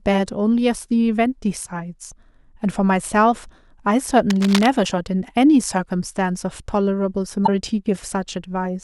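A speech recording with two kinds of fault. From 4.3 to 4.67 s, a burst of dense, irregular scratching and rustling sits over the speech, roughly 10 dB below it. This is cable scratch noise, likely from a worn cable, connector or control being moved. As the contact resistance flickers, the disturbance rides on the signal for just over a third of a second. Damaged data in a compressed stream causes two short glitches, at 4.82 to 4.87 s and 7.43 to 7.49 s. At each point the decoder hits corrupted frames that it misreads or discards, loses sync and hunts for the next valid frame header. The result is a brief glitch lasting around 50 ms.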